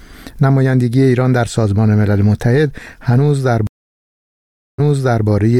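A stream reconnect breaks the audio at 3.67 s: it drops to about 1.1 s of dead silence, then resumes roughly 0.49 s earlier, replaying a short stretch, by 5.27 s. On a waveform this shows as a flat gap followed by repeated material.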